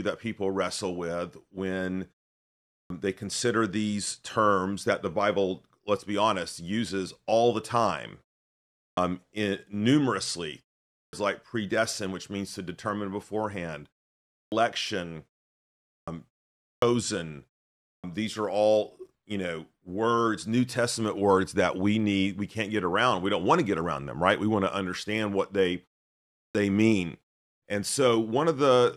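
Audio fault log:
2.73, 8.78, 10.94, 14.35, 15.91, 16.64, 17.87 and 26.36 s, clipped start after a pause: after gaps of 0.38 to 0.7 s, the output wakes late. About 165 to 190 ms of each onset is lost, so words begin abruptly.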